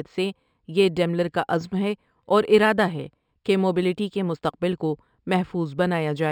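Imaging from linear upsampling runs through the whole of this speech clip. The audio appears to have been raised from a 12 kHz rate to 44.1 kHz by drawing straight lines between samples, and that crude interpolation filters poorly. The top of the band sounds dulled, and a faint mirrored copy of the spectrum sits in the 6 to 12 kHz region, roughly 35 dB below the speech, giving sibilants a light metallic shimmer.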